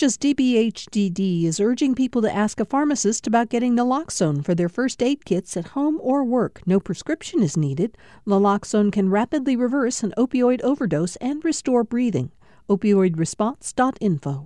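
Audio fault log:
No faults can be heard anywhere in this speech clip.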